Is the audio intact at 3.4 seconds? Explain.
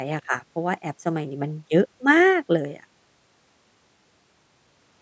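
Yes, the speech at 3.4 seconds is intact, with nothing wrong at that moment beyond the ordinary call microphone processing, whose band stops at about 8 kHz.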